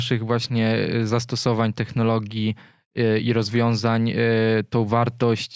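No technical faults can be heard anywhere in this recording of speech. Nothing interrupts or disturbs the sound at any point.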